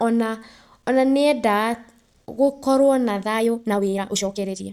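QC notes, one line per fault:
3.19–4.72 s time-stretched section: after "gũkorwo na", pace jumps 1.94x at unchanged pitch, rushed, likely from dropped short pieces; spectrogram shows squeezed syllables, waveform splices.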